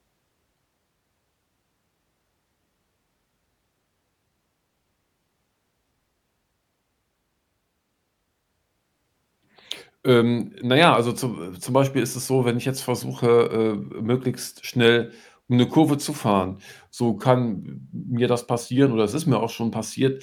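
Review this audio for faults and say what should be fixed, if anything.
Nothing needs fixing; no faults are audible.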